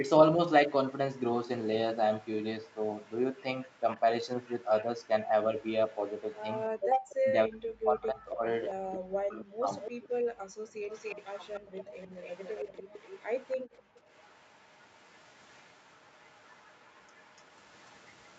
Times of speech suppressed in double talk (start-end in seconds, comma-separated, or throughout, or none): 7.14-10.07